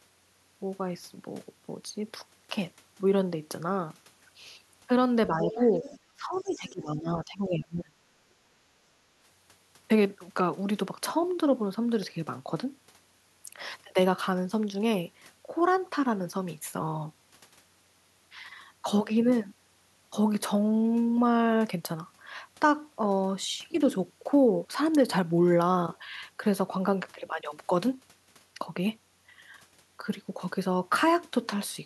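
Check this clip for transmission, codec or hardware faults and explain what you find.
Three echo-canceller faults show up in the speech, all between 5 and 9 seconds.

Speech suppressed in double talk, from 5.27 to 5.62 s and from 6.15 to 8.0 s. With both ends talking, the canceller likely mistook the talker for echo and turned everything down. The voice dips modestly in the first stretch and falls much deeper through the second.

Other side's voice leaking through, from 5.74 to 5.99 s and from 6.47 to 6.7 s. Residual loudspeaker echo was likely left in the microphone signal. A second, faint voice is audible in the first span and is barely there in the second, sitting well below the talker.

Background gated by the echo canceller, from 8.3 to 8.43 s. While the loudspeaker played, the canceller clamped the microphone, dropping the room sound by about 13 dB for a brief moment before it returned.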